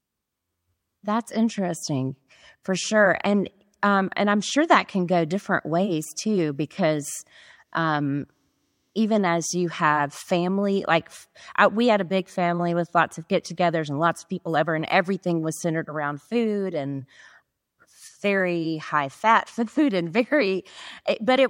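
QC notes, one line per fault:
No faults are heard anywhere in this speech recording. Nothing here calls for a QC entry.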